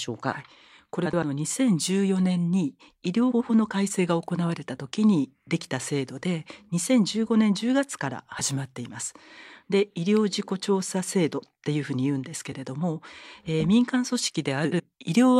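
Frames out of order at 1.05–1.23, 3.31–3.50, 8.39–8.41, 12.51–12.55 and 14.65–14.80 s: adjacent blocks of audio, each roughly 20 to 90 ms, play swapped, giving a garbled flutter. Unlike a dropout, no time is missing.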